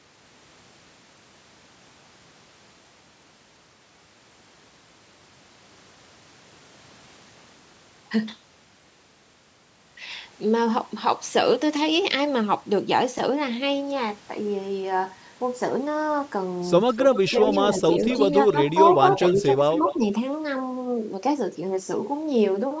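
From 16.92 to 17.59 s, 17.93 to 18.53 s and 18.85 to 19.96 s, a copy of the speech returns 258 ms late, first only a few dB under the direct voice and then somewhat quieter. This is an echo leak, likely from a loudspeaker echo the canceller missed. The fixed delay sets it apart from room reverberation. At 19.35 to 19.6 s and 19.95 to 20.02 s, during that overlap, the talker briefly dips by a few dB. This points to speech suppressed in double talk, likely from the canceller turning down both its own talker and the echo.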